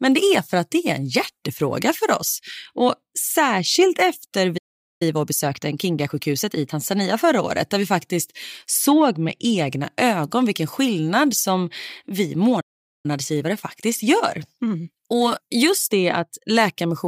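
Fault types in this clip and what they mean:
Playback stall: The speech cuts out mid-flow twice, at 4.57 s and 12.60 s. Each silence lasts about 0.43 to 0.44 s. The player likely ran short of data or was blocked. The sound then resumes.
Time-compressed catch-up: After each stall the player shrinks its backlog by dropping small slices and cross-fading the joins. The speech sounds hurried at normal pitch. It runs 1.25 times fast from 5.02 to 6.74 s, then 1.1 times from 13.06 to 16.06 s.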